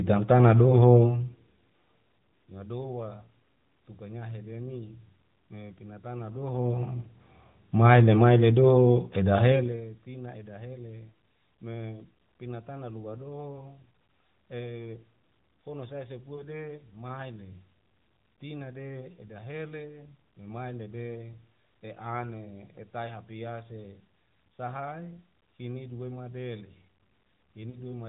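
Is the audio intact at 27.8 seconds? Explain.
No. Lost AMR speech frames from 27.70 to 27.80 s: the decoder replays the last good settings, producing a brief warbly dip, not a hard silent gap.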